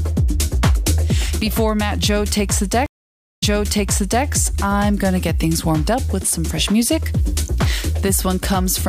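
At 2.86 s the audio drops out for about half a second, 530 ms, and when it comes back it's jumped backwards by roughly 0.86 s, so you hear a stretch repeat. That's a stream reconnect: the connection broke, the player went quiet, reconnected, and spun up a fresh decoder mid-stream, with the server resending a burst from slightly earlier. The first frame or so comes in muted or fading up, and the whole disturbance settles by 4.25 s.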